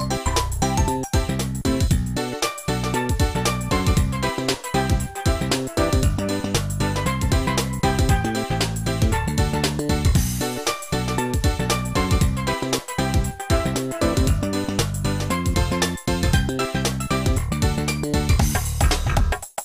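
No technical faults are audible.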